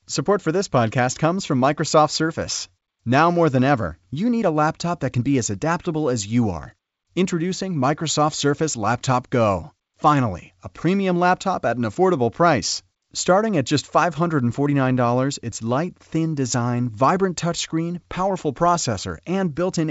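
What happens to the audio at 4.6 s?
Nothing goes wrong at 4.6 s: the speech carries on intact through that moment, with the ordinary G.722 wideband telephone coding at 64 kbit/s and its band limit near 7.7 kHz.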